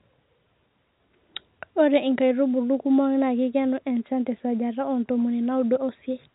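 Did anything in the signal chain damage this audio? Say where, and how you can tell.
No, nothing in the signal chain damaged this speech. What you hear is ordinary G.711 telephone coding: the band stops at about 3.9 kHz, which fits a 64 kbps mu-law line, and any quantisation noise riding under the speech is faint at most.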